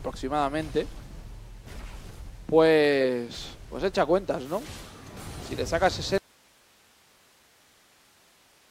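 At 6.18 s the sound drops out abruptly and never comes back, leaving just hiss roughly 35 dB down through to the end. That's an audio dropout to a faint residue, likely the signal feed breaking while the path after it stayed live.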